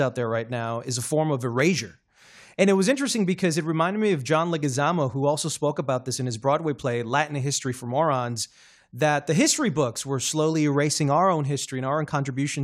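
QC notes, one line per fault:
1.60 s, dropped samples: a single sharp click lands just after "is a form of", with no gap or missing sound around it. On a spectrogram it would show as one thin vertical line. The likely cause is that a tiny fraction of a millisecond of the stream went missing, so the waveform jumps straight from one value to a later one. That step change sprays energy across the whole spectrum for an instant, and the ear hears it as a click.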